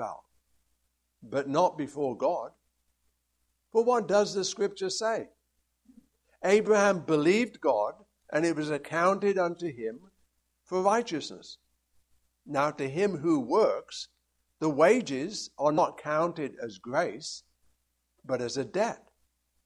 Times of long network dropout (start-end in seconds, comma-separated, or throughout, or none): none